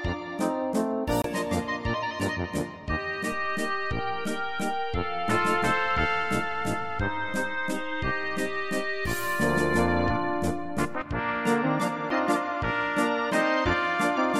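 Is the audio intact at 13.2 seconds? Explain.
Yes, the audio at 13.2 seconds is intact, with no dropout, glitch or other fault at that moment.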